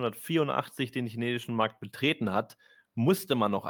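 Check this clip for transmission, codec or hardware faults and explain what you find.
Nothing in this speech recording points to a fault. There is nothing to explain and no problem to report.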